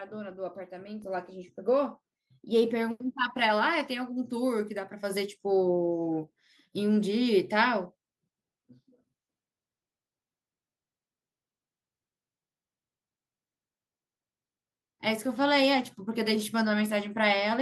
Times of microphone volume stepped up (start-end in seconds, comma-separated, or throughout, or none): 1.02, 2.04, 5.10